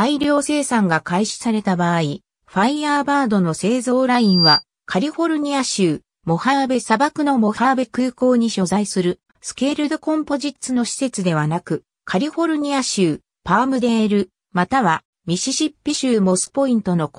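From 4.15 s to 4.64 s there is a loudspeaker feedback squeal: a single tone at 4.7 kHz swells over roughly a third of a second until it sits a few decibels above the rest of the sound, then stops. The microphone was picking up its own loudspeaker, and at that frequency the loop gain went above one. Unlike a steady interfering whistle, this tone grows on its own from nothing.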